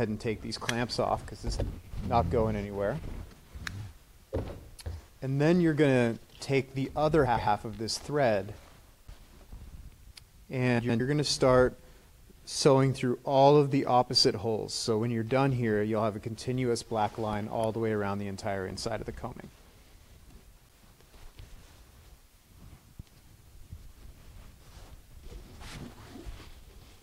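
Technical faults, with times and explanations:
7.26–7.47 s, 10.79–11.00 s, 21.42–21.64 s and 25.00–25.21 s, frames out of order: in each case two adjacent blocks of coded frames reached the decoder swapped and were played in that order. Each span of roughly 0.2 s has its two halves of about 0.1 s exchanged, which points to runs of four frames. The sound briefly turns into a garbled flutter, and no time goes missing.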